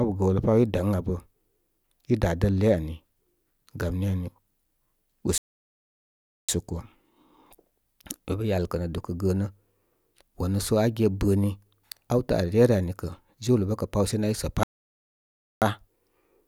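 A speech clip with two playback stalls: the sound cuts off mid-flow from 5.38 to 6.49 s (about 1.11 s) and from 14.63 to 15.62 s (about 0.98 s), likely because the player ran short of data or was blocked. Each shows as a flat waveform and a blank spectrogram band.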